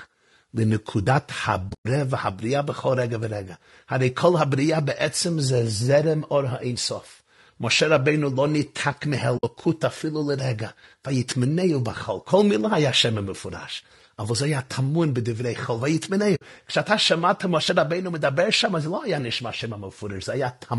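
Throughout the speech, a low-bitrate encoder is likely working with very short frames, which fits low-delay AAC compression (AAC-ELD) at about 32 kbps. Short frames cannot separate the pitch harmonics cleanly, and at this rate the damage is plainly audible: the voice sounds rough and grainy, noise fills the gaps between harmonics, and the top band sounds dull and synthetic.

At 1.07 s, the program likely failed to read its input before the hardware overwrote it. That is a dropped buffer (overrun). About 40 ms of audio vanishes and the two sides are butted together, so there is a sudden skip forward in the sound rather than a gap.

From 1.69 to 1.86 s, AAC frame loss with muting occurs. The decoder received no data for several frames and zeroed their spectra. About 140 ms goes missing, scattered across 160 ms with the longest run near 100 ms, which fits seven 20 ms frames. The overlapping windows fade the sound out and back in, so the result is soft-edged dropouts.

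The same muting recurs from 9.37 to 9.44 s and from 16.35 to 16.42 s. Each time about 60 ms is lost, matching three frames, and each is a brief, smoothly faded hole.

At 17.69 s, a second dropped buffer removes about 20 ms and leaves a small jump in the speech.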